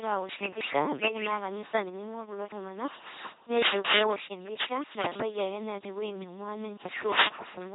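Throughout the speech, LPC-10 vocoder coding dominates: each moment is rebuilt from a ten-pole filter fed by pulses or noise, giving a buzzing robotic voice, consistent with 2.4 kbit/s. A spectrogram shows rigid harmonic stripes, hiss blocks, and nothing above 3.9 kHz.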